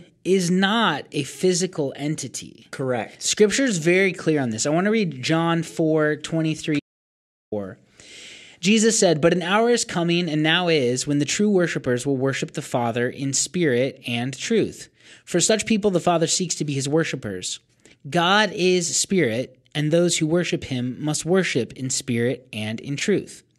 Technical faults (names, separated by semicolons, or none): audio dropout to silence